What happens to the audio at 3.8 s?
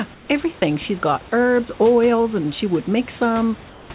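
From 3.7 to 3.9 s the real background gives way to flat, featureless hiss about 1 dB quieter, likely comfort noise replacing the background while transmission paused.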